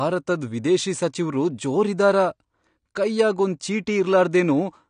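AAC compression runs through the whole clip: the speech is dull and smeared, with a warbling, fizzy texture on sibilants and nothing above 9.7 kHz. The likely cause is AAC-LC coding at a low bitrate, which fits around 32 kbps, lowering the cut-off.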